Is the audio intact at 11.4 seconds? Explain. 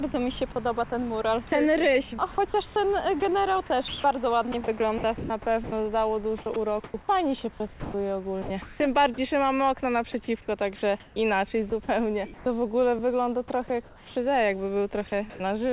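No. From 11.0 to 12.46 s the sound is chopped, most likely by the sender's voice detector gating transmission on and off: about 300 ms of the signal is missing and filled with synthetic comfort noise instead. The result is a choppy stretch where parts of the sound drop out, leaving two or more holes. Throughout, the audio stays band-limited to 4 kHz by the G.711 call path.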